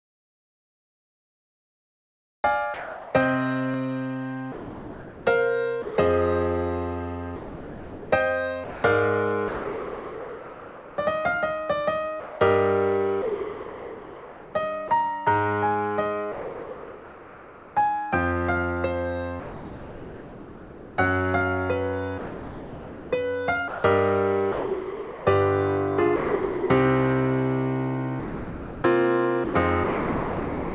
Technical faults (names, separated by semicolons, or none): comfort noise in place of the background; sound dropped by the voice detector; sound chopped by the voice detector